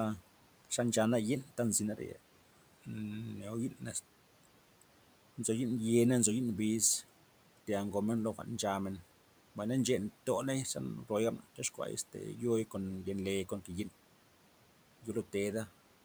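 Speech cut by the noise suppressor, 11.39 to 11.79 s, just before "este yo'i kon yen'le": the suppressor mistook quiet speech for the room noise sitting about 23 dB below it and pulled it down by up to about 10 dB. Roughly a tenth of a second sounds swallowed and faint.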